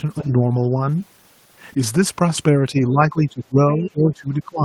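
Speech suppressed in double talk at 0.21–0.29, 2.71–3.6 and 3.78–4.64 s: the level drops by up to about 20 dB, likely from an echo canceller ducking the local talker along with the loudspeaker echo.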